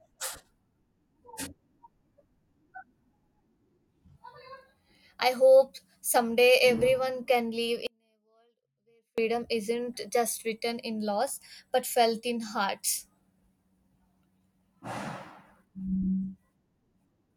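At 7.87 s the speech cuts off abruptly, and until 9.18 s only a faint sound remains, roughly 40 dB below the normal signal level. This is an audio dropout to a faint residue lasting 1.31 s, likely a brief loss of the signal feed while the downstream path stayed live.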